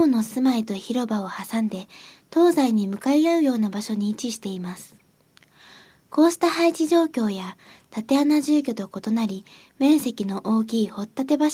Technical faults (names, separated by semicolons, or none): none